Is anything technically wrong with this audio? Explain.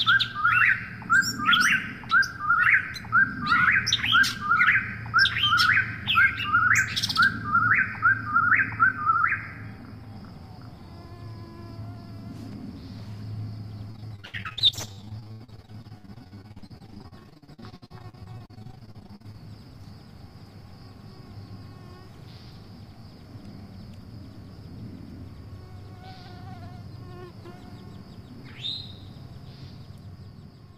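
Yes, repeated packet loss from 13.9 to 19.4 s: frequent gaps up to 84 ms, each filled by extending the last sound, so it goes choppy and robotic.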